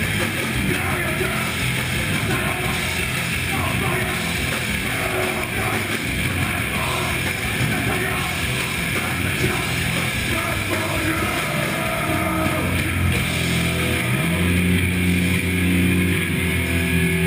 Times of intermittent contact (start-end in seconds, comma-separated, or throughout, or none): none